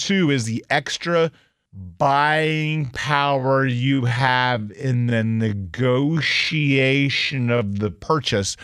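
It's a speech clip, and from 1.73 s to 7.99 s there's a time-stretched section: the pace abruptly drops to roughly half speed, about 0.52x, while the pitch stays where it was, so the speech drags through that stretch. The likely cause is software lengthening that part of the audio to fill a set duration, holding the pitch steady by repeating short pieces of the sound rather than simply playing it back slower.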